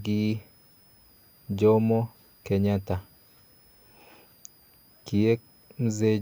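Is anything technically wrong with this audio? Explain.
Yes, the speech carries a switching supply whistle throughout. A power supply's burst-mode switching leaks a faint high tone, in the range of 4.73 to 5.24 kHz, roughly 35 dB down.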